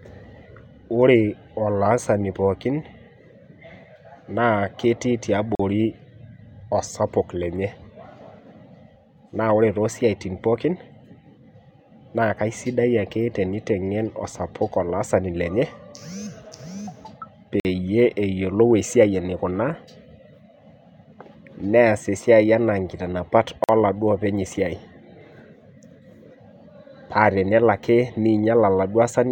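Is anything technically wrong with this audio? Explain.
Yes. The speech has three instances of a gap between stream segments: at 5.55 s just after "na ketii" (about 43 ms), at 17.60 s (about 50 ms), and at 23.64 s just after "esiai ana nkiitanapat" (about 48 ms). Their spacing fits 6-second segments whose timestamps leave a small hole at the joins, which the player fills with silence. Each one is heard as a sudden, hard-edged dropout with no audio missing around it. On a waveform it shows as a flat line with abrupt edges, and on a spectrogram as a narrow blank vertical stripe across all frequencies.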